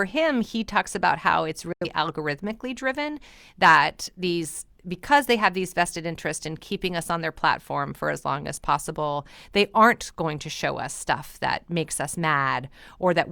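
From 1.73 to 1.86 s, a digital broadcast dropout mutes the speech after a 3 ms fade; failed frames leave a flat waveform and a blank spectrogram gap.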